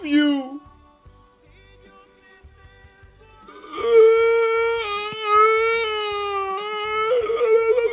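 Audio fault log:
Nothing to log here; there's nothing wrong to flag anywhere in this one.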